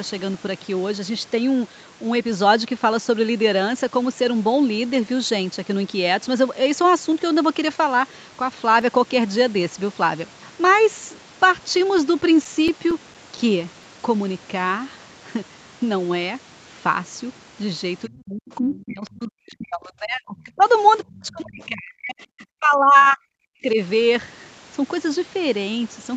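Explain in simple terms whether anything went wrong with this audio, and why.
CD scratch ticks appear in two bursts, from 7.89 to 9.28 seconds and again from 11.75 to 13.83 seconds. They are small, evenly spaced clicks, about seven in the first burst and ten in the second. A scratch on a disc hits the same spot on every turn. The player cannot rebuild the damaged data there, so it patches or silences a sliver of sound each time round, and the repeats give the regular rhythm.

Speech suppressed in double talk affects the talker from 18.07 to 20.63 seconds, from 21.07 to 23.25 seconds, and briefly from 23.44 to 23.78 seconds. The voice sinks sharply, almost disappearing at its deepest points. The likely cause is an echo canceller on the call. When both people spoke at once, it could not tell the talker apart from the loudspeaker's echo, so it turned everything down.

Other side's voice leaking through shows up as faint scraps of a second voice under the talker, from 18.75 to 18.84, from 20.37 to 20.44, and from 21.12 to 21.65 seconds. 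These are quiet and short, heard only as fragments. This is likely loudspeaker sound that the echo canceller failed to remove fully from the microphone. It happens during the same stretches where the talker's own voice is being pushed down.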